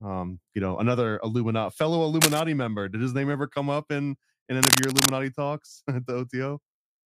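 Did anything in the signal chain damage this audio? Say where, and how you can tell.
Yes. Cable scratch noise appears at 2.21 to 2.40 s and again at 4.63 to 5.11 s as dense, irregular crackling bursts sitting a few decibels above the speech. That points to the analogue wiring stage, likely a worn cable or connector being moved while its contact resistance fluctuated rapidly.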